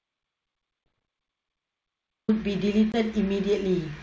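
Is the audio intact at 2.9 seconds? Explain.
No, there's packet loss on an ADPCM call from 2.92 to 2.96 s. About a packet's worth, 20 ms, drops out as a hard-edged silent hole. The G.722 decoder's predictor and step size then lose track of the sender's, so the sound comes back slightly off for a few tens of milliseconds.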